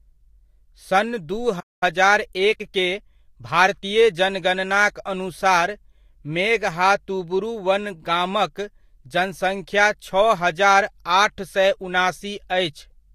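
At 1.60 s, right after "सन् दू", the speech cuts to silence for about 215 ms and resumes at 1.83 s. This is a playback stall, likely the player running short of data or its thread being blocked.

From 1.83 s to 3.97 s, just before "जनगणनाक अनुसार", a time-compressed catch-up follows. The player works off its backlog by trimming and cross-fading small slices, so the speech runs about 1.1 times faster. The pitch stays normal, unlike a plain sped-up playback.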